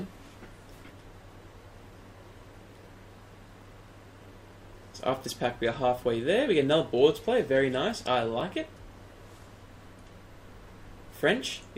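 No technical faults can be heard anywhere in the audio; the signal holds steady throughout, with no breaks, level problems or added noise.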